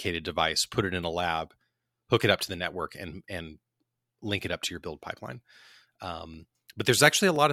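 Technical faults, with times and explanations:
5.31 to 7.36 s, periodic USB or driver dropouts: just after "up to your build", small ticks recur every 1.02 s, a few in all. Each comes from a moment when the USB bus or audio driver was briefly blocked by another task, so a tiny slice of audio, around half a millisecond, was skipped rather than padded with silence. The waveform jumps where the ends join, which produces a click. The clicks are tied to the interruptions, so their spacing stays fixed regardless of what is being said.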